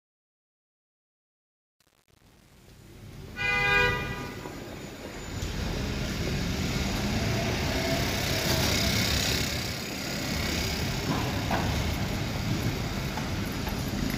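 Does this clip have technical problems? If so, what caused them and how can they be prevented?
Yes. Truncation distortion on the fade-in lasts from 0.0 to 3.90 s and is worst up to 3.81 s. The quiet opening sounds gritty, which fits a fade stage keeping only 8 bits with no dither. Unlike clipping, the damage worsens as the level falls rather than at peaks. To prevent it, process fades at high bit depth and add dither before any reduction in word length.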